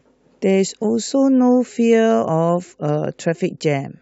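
No technical faults can be heard anywhere in the recording; the signal arrives intact and unbroken from its first moment to its last.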